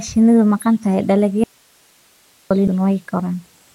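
At 1.44 s the signal path most likely lost its feed while the chain after the break stayed live, giving an audio dropout to a faint residue. The speech cuts off abruptly and, until 2.51 s, roughly 1.07 s holds only hiss about 40 dB below the speech.

At 2.67 s, damaged data in the compressed stream makes the decoder misread a frame and lose sync while it hunts for the next valid header. The result is a brief glitch in the speech.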